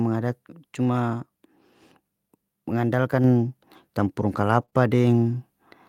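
At 3.24 s the microphone volume steps up by about 4 dB in one jump. Voice and background noise rise together, which separates it from a natural change in speaking loudness. From 4.61 to 4.63 s a lost packet is rebuilt from error correction. The 20 ms stretch fits a single packet, played from a low-bitrate copy, so there is no gap, only a briefly rougher, noisier texture. Two short concealed packet losses follow, from 4.65 to 4.70 s and from 4.70 to 4.74 s. Each is about 20 ms of missing audio that the receiver filled by extending the preceding sound, so it is heard as a smear or wobble rather than as coarse grain. From 4.74 to 4.76 s there is another 20 ms lost packet rebuilt from error correction, again gapless and gritty rather than smeared.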